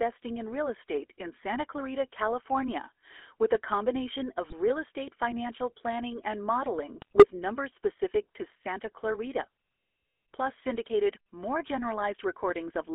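From start to finish the speech carries the buzzy, gravelly roughness of the GSM full-rate codec, a coarseness consistent with a 13 kbps stream. The codec rebuilds the voice from a vocal-tract filter excited by sparse, regularly spaced pulses, so fine detail is replaced by a grainy rasp. The band runs from roughly 300 Hz to 3.5 kHz. A spectrogram shows a hard ceiling at 3.5 kHz, little energy below 300 Hz, and harmonics that look smeared and noisy.

At 4.44 to 4.53 s, between "with a combination" and "real estate financial planning", GSM bit errors break through. Corrupted filter, pitch and gain values reach the decoder, so the sound collapses into a short squawk and pop for what fits about five frames. A second, longer burst follows at 6.98 to 7.26 s, after "estate financial planning and" and before "numbers specific to", and sounds like gargling. Its extent matches roughly eleven damaged frames. 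On a waveform both bursts appear as abrupt level spikes or dropouts in blocks. A spectrogram shows vertical slabs where the spectral shape suddenly warps for each bad frame.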